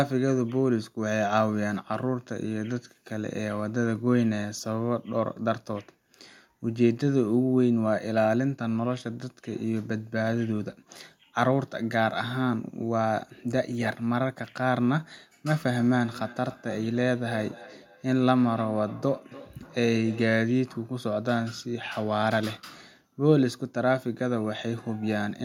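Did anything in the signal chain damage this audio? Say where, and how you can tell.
Yes. Feedback echo between two devices appears from 15.48 to 20.48 s, at the call-processing stage. The speech returns at a steady interval of roughly 0.3 s, peaking at about 18 dB below the direct speech. Two devices in the same room were on the call, and one was playing back what the other's microphone sent. That microphone picked the playback up again, and each device's echo canceller removes only its own output, so the loop went through.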